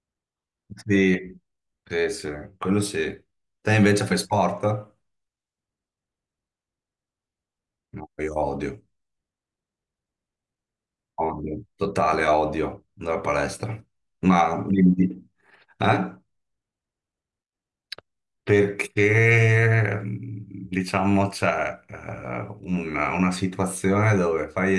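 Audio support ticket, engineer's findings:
No faults found in clip.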